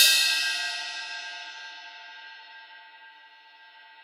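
No technical faults can be heard anywhere in this recording of sounds.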